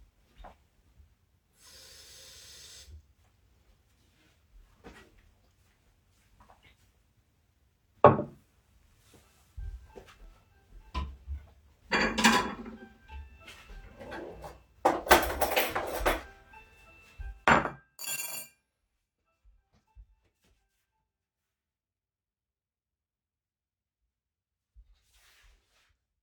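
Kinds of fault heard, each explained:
Periodic USB or driver dropouts: From 8.24 s to 12.24 s, a tiny slice of audio goes missing once every second. Each gap lasts only about a millisecond and is filled with silence. That happens when a background task briefly blocks the USB bus or the audio driver at a steady interval. The result is a row of about five regular ticks, heard only because sound is present at those moments.
Zipper noise: Between 17.23 s and 17.88 s, the level drops by roughly 25 dB. It does not glide down. It falls in 2 dB steps, around twenty of them per second, with no smoothing between them. Each jump makes a small click in the waveform, so the fade carries a fast ticking, zipping texture.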